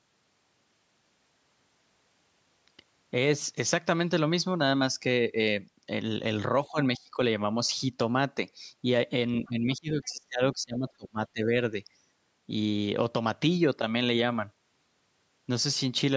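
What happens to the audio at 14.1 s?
Nothing goes wrong at 14.1 s: the speech there is intact, carried through the call's microphone processing, which trims the lowest bass and leaves nothing above 8 kHz, as that path normally does.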